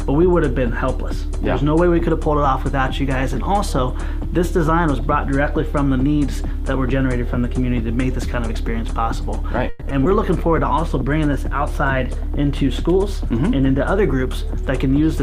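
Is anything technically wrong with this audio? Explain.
Yes, there are four kinds of fault, all clustered in the second half of the clip.

From 9.69 to 9.83 s there is a call audio freeze. The sound stops advancing and a fading continuation of the last sound fills 120 ms. The likely cause is delayed packets draining the jitter buffer. Nothing is lost: the audio resumes where it stopped, now 120 ms later. That distinguishes it from packet loss.

Short concealed packet loss occurs at 9.89–9.92 s and again at 10.04–10.07 s. In each, about 20 ms never reached the decoder and about 10 ms was synthesized from the preceding sound before blending back. Unlike the freeze, real audio is actually missing here. Each one is a brief smear rather than an inserted pause.

A call bitrate drop runs from 10.25 to 14.62 s, when the encoder was cut from 64 to 22 kbps for about 4.3 s. Coarser coding makes the sound rough or watery and may dull the top end. 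It lasts seconds rather than tens of milliseconds, and it clears at 14.62 s.

A jitter buffer speed-up runs from 13.24 to 15.14 s. The receiver trimmed pitch-period slices totalling about 50 ms to shrink the buffered delay. Playback runs at 103% with pitch unchanged, which is what separates it from a resampling error that would raise the pitch.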